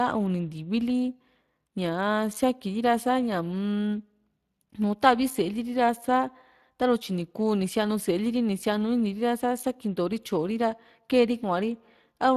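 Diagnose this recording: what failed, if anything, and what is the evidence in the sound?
Throughout the speech there is a plainly audible codec texture, a grainy, noisy roughness with a hoarse edge that never lets up, and nothing at all above 15.4 kHz. The stage is the codec: this is Speex coding damage. Speex is a CELP speech codec that rebuilds each frame from a vocal-tract filter and a coded excitation, and the roughness comes from that excitation being coarsely quantised. The degree of damage fits a setting around 22 kbps.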